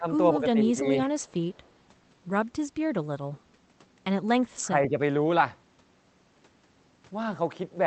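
In the first second the speech keeps sinking in level. From 0.00 to 0.06 s, across 0.37 to 0.85 s and again at 1.06 to 1.10 s the voice drops by about 10 dB in short pieces, roughly 0.4 s in total. This is speech suppressed in double talk, likely an echo canceller that could not tell this talker from loudspeaker echo while both sides spoke, so it turned everything down. On a waveform the envelope shows sudden notches. On a spectrogram the energy thins across the band in those spans.

Right after this, from 1.20 to 1.32 s and from 1.51 to 1.72 s, a faint delayed copy of the voice trails behind it. It sits about 35 dB below the speech and lags by 154 ms. This is an echo leak, likely residual loudspeaker sound at the far end that its canceller failed to remove and that was sent back. On a spectrogram it shows as weak ghost traces of the preceding harmonics, shifted 154 ms later. It is barely visible on a waveform.

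From 4.62 to 4.97 s the speech is suppressed in double talk again, more gently this time. The dip is about 5 dB, spread over roughly a fifth of a second, and shows as a shallower notch in the envelope.

Throughout the clip, content stops at 8 kHz on the spectrogram, consistent with the Opus call path running at wideband settings.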